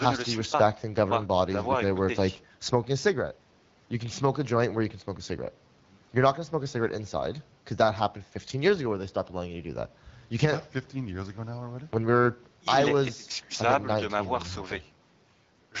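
Nothing stood out on listening to this speech clip, which carries the band-limited character of AMR wideband (HD Voice) coding at a rate that keeps speech clear.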